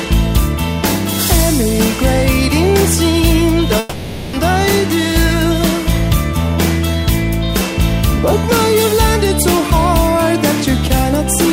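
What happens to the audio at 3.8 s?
At 3.79 s the audio breaks into a long network dropout lasting until 4.36 s, a gap of roughly 0.57 s. The cause is likely a stall in packet delivery: the receiver kept extending the last sound it had, so about 540 ms of the original is replaced by a smeared, buzzy continuation with no silent stretch. When normal audio resumes at 4.36 s, that missing portion is simply gone rather than delayed.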